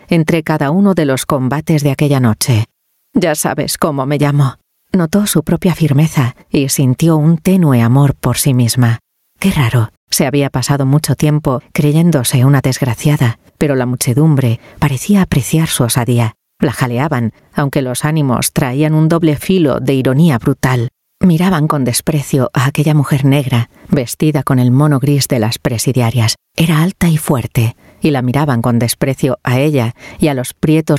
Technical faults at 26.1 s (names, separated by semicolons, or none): gain pumping